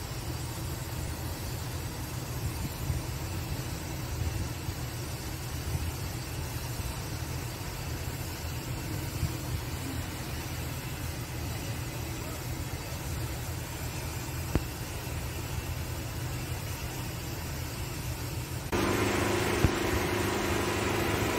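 At 1.08 s the sound jumps forward, the mark of a dropped buffer (overrun). It is likely that the recording side failed to read its samples before the hardware overwrote them, so roughly 10 ms of audio vanished and the material on either side was spliced together. Nothing fills the gap: unlike an underrun or a dropout, there is no brief silence or repeated fragment, only the abrupt join and a skip in the sound.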